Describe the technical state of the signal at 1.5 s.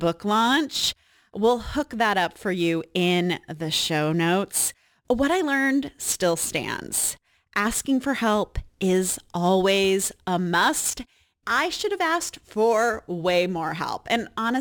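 At 1.5 s the speech carries crude rate conversion, present throughout the clip. Samples appear repeated without filtering, which fits a 44.1 kHz to 48 kHz step, leaving an inharmonic, gritty fizz roughly 20 dB below the signal that tracks louder and brighter sounds.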